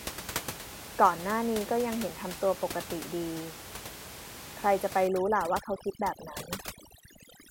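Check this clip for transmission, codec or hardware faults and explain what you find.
One processing fault is present, with steady room noise sitting about 12 dB below the speech. From 5.07 s to the end, overdone noise removal sets in: bands near the noise estimate are pulled down hard, taking quiet speech detail with them, so the background drops and breaks up into twinkling specks.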